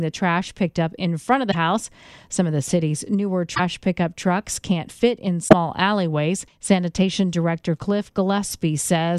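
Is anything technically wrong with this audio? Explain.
Yes. Three brief glitches interrupt the speech, at 1.50 to 1.55 s, 3.54 to 3.60 s, and 5.47 to 5.53 s. Each lasts about two 26.1 ms frames. The likely cause is a broken MP3 bit reservoir: after dropped frames, the decoder reads borrowed bits from the wrong data.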